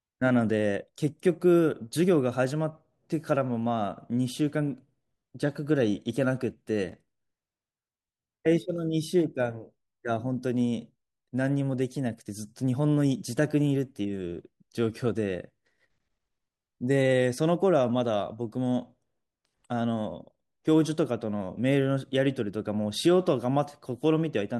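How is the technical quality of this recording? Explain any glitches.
From 6.89 to 7.59 s, processor overload crackle: dozens of missed buffers of a few milliseconds each are skipped, leaving hard-edged gaps heard as gritty tearing.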